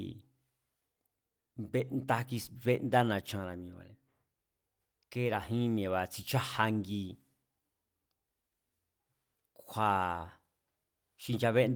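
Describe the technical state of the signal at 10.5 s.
At 10.5 s the speech signal is intact, with no audible technical fault at that moment.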